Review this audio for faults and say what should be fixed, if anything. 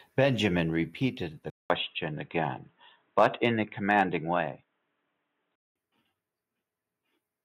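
The microphone volume is stepped down at 1.02 s, by about 2 dB, and again at 3.63 s, by about 4 dB. Speech and background drop together in a single step, likely because the call software lowered the device's input volume after detecting loud peaks. Disable automatic input gain control and set the level manually.

The input switches to a poorer device at 1.50 s, after about 200 ms of silence, and switches back at 5.76 s. In between, the band is narrower, so the speech sounds dull and boxy. The level shifts by roughly 5 dB, and a new noise floor appears around 50 dB below the signal. This likely reflects a change to another microphone or a headset call profile. Lock the input device in the system settings.

Microphone overload occurs from 1.70 to 1.72 s, from 3.18 to 3.46 s, and from 3.91 to 4.01 s. Peaks exceed the converter limit by about 1 dB, about 3 dB and about 1 dB respectively, and the flattened tops add a harsh crackle to the loudest syllables. 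The likely cause is input volume set too high. Lower the input gain to leave headroom.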